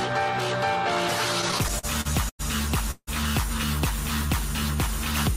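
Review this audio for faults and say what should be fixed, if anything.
From 1.41 to 2.41 s the audio drags in repeated stalls (stutter): nine short holds, the longest about 100 ms, together filling 237 ms, roughly a quarter of that second. Packets kept arriving behind the playout rate, so the jitter buffer drained repeatedly and the receiver stretched the last sound each time. Nothing is lost, only delayed. On a spectrogram this shows as smeared, flat-topped horizontal bands; the waveform shows repeated, near-periodic stretches. A larger adaptive jitter buffer or a steadier network path would prevent it.

From 2.91 to 3.09 s the sound stops moving for 161 ms and becomes a fading tone, with its last 50 ms silent, before resuming where it left off. This is a call audio freeze, likely caused by packets being held up in transit so that the jitter buffer emptied. The playback delay then stays 161 ms later. 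A spectrogram shows frozen horizontal lines fading into a blank strip; the waveform shows a decaying repeated pattern, then flat silence. Better network prioritisation for the audio stream would prevent it.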